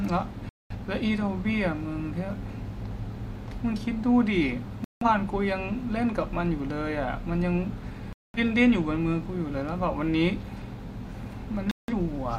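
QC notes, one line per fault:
0.49–0.75 s, 4.84–5.06 s, 8.13–8.39 s and 11.71–11.93 s: digital broadcast dropout. The speech cuts abruptly to silence four times, holes of roughly a quarter and a fifth of a second, then resumes further along with that stretch simply gone. The receiver lost the signal or rejected corrupted frames and muted until valid data returned; the gap lengths fit runs of five and four lost frames of about 43 ms each.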